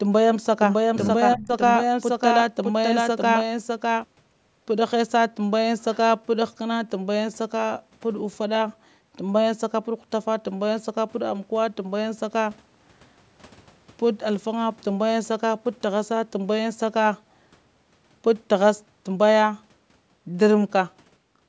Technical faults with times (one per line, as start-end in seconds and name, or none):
1.35-1.52 speech suppressed in double talk
1.42-1.47 echo leak